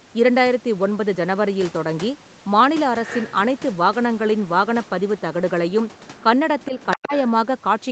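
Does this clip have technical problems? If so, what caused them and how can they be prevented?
Yes. Other side's voice leaking through, at 3.05–3.34 s and 6.62–7.04 s: a second, fainter voice about 10 dB under the speech, likely residual loudspeaker echo that the echo canceller missed. On a spectrogram it shows as a weaker, overlapping harmonic pattern. Prevention: use a headset or better acoustic echo cancellation.

Speech suppressed in double talk, at 6.70–6.74 s and 6.96–7.13 s: the speech dips by a few decibels, then by about 15 dB. The canceller likely ducked both voices while they overlapped. The waveform shows brief notches in the envelope. Prevention: tune the echo canceller's double-talk detection to keep the near-end speech.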